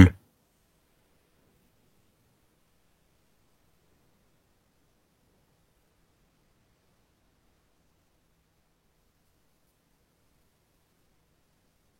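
Frames out of order occur at 4.87, 7.34 and 10.27 s: the decoder received neighbouring runs of frames swapped and played them in that order. At 4.87 s the swapped blocks are about 93 ms each, which fits runs of two frames. The later two are about 46 ms, which fits single frames. Each spot sounds like a brief garbled flutter. Nothing is missing, and the timing stays intact.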